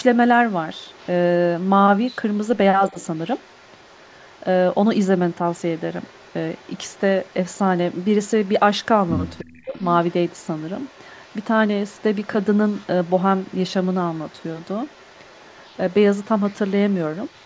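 A faint, delayed double of the speech trails it by 315 ms from 0.15 to 1.11 s, 1.58 to 2.58 s (slightly stronger, about 25 dB down), 2.89 to 4.86 s, 5.17 to 11.45 s and 11.87 s to the end, mostly about 30 dB below. This is echo leak, likely from a loudspeaker path the echo canceller didn't fully remove.

Inside that leak, the speech briefly dips by about 10 dB at 2.92 to 2.97 s, then drops out almost completely from 9.41 to 9.82 s. This is speech suppressed in double talk, likely the canceller turning down both talkers while the far side spoke.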